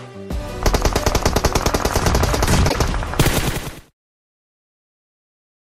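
A short disturbance breaks into the sound from 2.65 to 2.76 s, the mark of damaged data in a compressed stream: corrupted bytes made the decoder misread those frames, lose sync and hunt for the next valid frame header. The level then fades out smoothly from around 3 s to 3.94 s.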